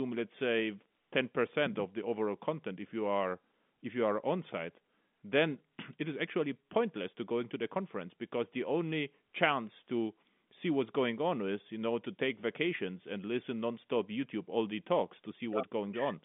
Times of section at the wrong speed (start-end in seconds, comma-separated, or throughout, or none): none